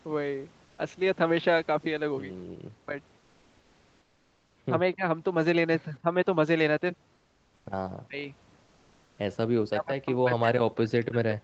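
Right at 0.65 s there's a short patch, about 120 ms, of comfort noise in place of the background. The real room noise, sitting about 35 dB under the loudest speech, gets swapped for a flat, featureless hiss that's about 3 dB quieter. That's likely Opus discontinuous transmission: the sender goes quiet once its voice detector decides nobody's talking, and the far end fills the gap with synthetic noise. Then come quick dips from speech suppressed in double talk, at 2.86 to 2.95 s, 4.94 to 5.04 s and 6.02 to 6.15 s. The first two last around a tenth of a second and the third about 50 ms, pulling the voice down by roughly 10, 20 and 15 dB. The likely culprit is an echo canceller that couldn't tell the talker from the loudspeaker echo while both sides overlapped, so it turned everything down. Comfort noise comes back from 7.13 to 7.65 s, about 3 dB down. The voice then nearly vanishes for roughly 150 ms around 8.05 to 8.2 s, dropping by something like 40 dB. 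Another stretch of that smooth substitute noise runs from 8.63 to 9.17 s, about 2 dB lower. From 9.69 s to the end, the double-talk suppression sets in again and chops the voice down hard, as much as roughly 40 dB at its deepest. Throughout, the Opus call path caps everything at 8 kHz, so the top end is dull anyway.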